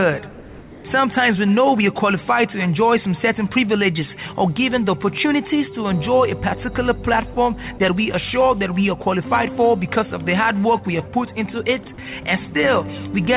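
From 0.3 to 0.84 s there is comfort noise in place of the background. The real background sits about 22 dB below the loud parts. For 540 ms it turns into a flat, featureless hiss, about 3 dB quieter. The sender likely stopped transmitting during a pause, and the receiver filled the gap with synthetic noise.

From 7.34 to 7.36 s, and again from 7.78 to 7.8 s, sound is dropped by the voice detector. Each time, 20 ms gives way to steady noise or near silence, and about 10 ms of real sound is lost. The detector likely took faint sound for background and briefly stopped sending. The noise is band-limited like the rest of the call audio, with nothing above 4 kHz.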